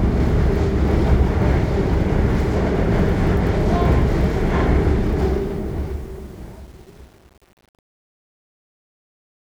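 From 5.20 s to 9.53 s, a fade-out is rendered with too few bits and no dither, which fits an 8-bit stage. That is truncation distortion on a fade. From 5.71 s the dwindling tail turns gritty.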